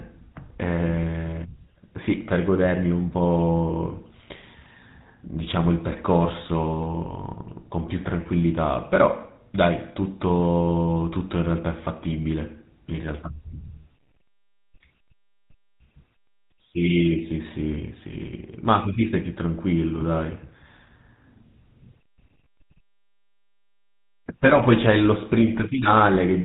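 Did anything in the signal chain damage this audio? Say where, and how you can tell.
Yes, at the codec stage. The speech has gone through the GSM full-rate codec from start to finish. Nothing survives above 4 kHz, and the voice carries a plainly audible buzzy, gravelly roughness. That comes from modelling the vocal tract and driving it with sparse regular pulses, which fits the 13 kbps full-rate mode.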